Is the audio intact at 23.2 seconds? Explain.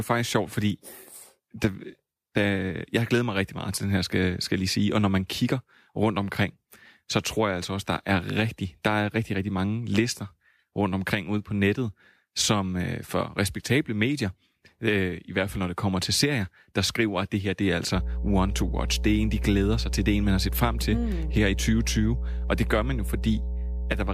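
No. From 17.96 s to the end at 24.14 s, including 23.2 s, the speech carries mains hum. A ground loop or stray coupling from a nearby transformer lets the 60 Hz power line leak into the signal path. It is heard as a steady, low 60 Hz drone with some low harmonics above it, sitting only a few decibels beneath the speech, so it competes strongly with it.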